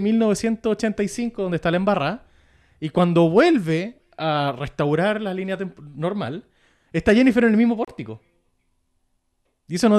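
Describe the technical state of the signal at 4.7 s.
The signal at 4.7 s is intact, with no fault audible at that moment.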